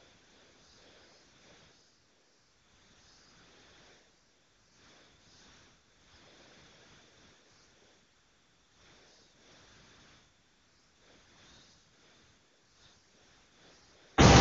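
From 0.00 to 14.17 s the sound is AMR comfort noise: no speech frames were sent, so the receiver synthesised steady, smooth noise from a coarse level and spectrum estimate. A waveform shows a flat, even band. A spectrogram shows a uniform wash with no harmonics or onsets. The wideband codec adds little audible damage, which fits a high-rate mode.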